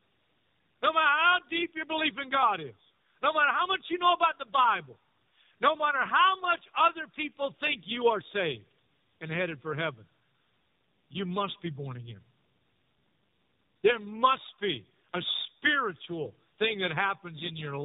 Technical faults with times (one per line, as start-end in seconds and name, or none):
0.00-17.85 tandem speech coding